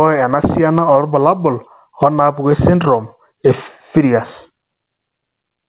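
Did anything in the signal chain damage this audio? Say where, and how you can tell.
Yes. Throughout the clip the level swings by around 15 dB, so loud and quiet passages sit unnaturally close together and the speech sounds squashed. This is gain pumping, likely from the microphone gain being set far too high at the input stage, with a fast limiter or compressor clamping down on each peak and releasing in the gaps. The narrow band, with nothing above 4 kHz, fits a normal G.711 call path.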